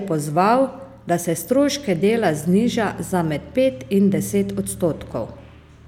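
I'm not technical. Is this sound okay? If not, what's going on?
Yes, nothing stood out as a problem when listening to this speech recording.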